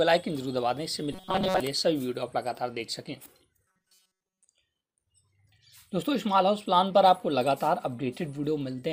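From 1.13 to 1.60 s and again from 3.68 to 4.47 s, the sound turns into a rigid, metallic buzz pitched at 188 Hz. This is robotic sound from repeated short buffers, likely caused by roughly 5.3 ms chunks being replayed in place of most of the real audio.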